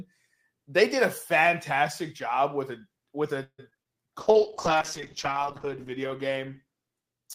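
Right after "job with a with", at about 3.43 s, you get a burst of repeated packet loss that runs to about 3.87 s. There are five separate holes, the longest about 149 ms. Around 193 ms gets papered over by stretching the last bit of sound forward, and about 80 ms just isn't there. Nearly half that stretch is concealment, so it comes out choppy, with chunks of speech missing.

Overlapping the tail of that, from about 3.82 to 4.07 s, there's a jitter buffer slow-down. The receiver needed to build up its reserve, so it padded things out by repeating tiny slices of the waveform, adding about 38 ms. That plays the speech at roughly 88% speed without shifting the pitch, so the syllables sound drawn out and a little sluggish.

Then from about 4.19 s through to the end there's a call bitrate drop. The encoder clearly got told to spend far fewer bits, and the sound fits a fall from about 32 kbps down to 8 kbps, bottoming out for about 1.45 s. 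At that rate the codec quantises much more coarsely and sheds the top end, so the speech turns muffled and a bit watery, with a rough, grainy edge.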